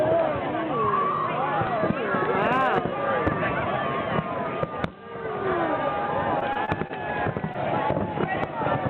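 From 6.39 to 6.91 s the audio breaks up with repeated packet loss (robotic sound). Four gaps, the longest about 25 ms, remove roughly 80 ms in total. Nearly all of it, 75 ms, is patched by stretching the preceding sound, so about 15% of that half-second is synthetic. The result is a choppy stutter with pieces missing. On a spectrogram the harmonics go flat and smeared in short blocks, and the waveform shows small repeated, overly regular segments.

At 7.53 to 7.56 s a single short concealed packet loss follows. About 20 ms failed to arrive in time, and 12 ms of it was filled by extending the last sound before the decoder blended back into the real signal. It is heard as a brief smear or wobble. On a spectrogram it appears as a thin vertical slice where detail briefly freezes or blurs. The waveform shows a short, unnaturally smooth stretch with a slight join at each end.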